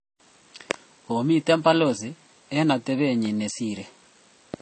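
Speech runs the whole clip with a band-limited, doubly processed quality: nothing is heard above 8.4 kHz, and the smeared, swirly coding artefacts carry a second layer of granular roughness on top. That combination points to transcoding between lossy codecs, likely an MP3 encode near 34 kbit/s re-encoded as AAC-LC near 32 kbit/s. The AAC stage wastes its small bit budget reproducing the MP3 damage, adds its own, and keeps the lowest cut-off in the chain.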